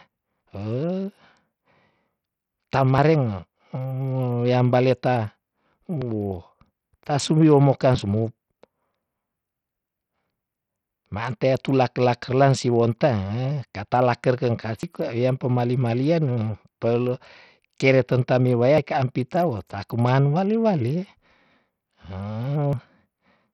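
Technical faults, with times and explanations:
Throughout: Bluetooth SBC compression. The speech carries heavy damage that is likely from SBC at a low setting, which fits roughly 64 kbps. The upper sub-bands starve, so treble flickers and grit rides the sound. A spectrogram shows patchy, blinking high bands over grainy noise.
2.98, 6.93, 14.83, 18.78 and 22.73 s: audio missing between chunks. About 50 ms drops out at each point, and the two sides are butted together. These include the skip between "katala kerkeng" and "kwa wiam pemali malian", and the one between "kele tentami waya" and "ka ampi". The spacing of about 4 s points to a likely chunked recorder losing audio at each handover. The waveform shows abrupt splices, and the spectrogram shows vertical seams.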